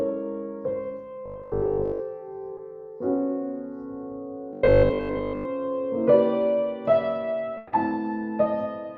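From 1.26 to 2.02 s and again from 4.53 to 5.45 s, new audio likely arrived too seldom, so playback looped a 20 ms buffer while most of the real audio was skipped. That loop imposes a fixed 50 Hz pitch, giving robotic sound from repeated short buffers: a rigid, metallic buzz that still loosely tracks the original.

Between 2.57 and 2.59 s, a short concealed packet loss occurs. A sliver of data missed the decoder, and the receiver extended the preceding sound for 10 ms before blending back. It comes across as a quick smear or wobble in the audio.

From 7.57 to 7.73 s, a burst of packet loss removed 150 ms of audio. The receiver carried the last sound forward and faded it across the whole gap, producing a held buzz or dying hiss. The audio then jumps ahead, with that stretch missing.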